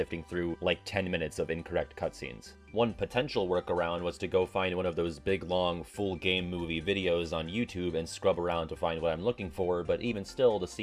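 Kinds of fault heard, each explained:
Nothing stands out here; no dropouts, clicks, distortion or other faults can be heard anywhere in it.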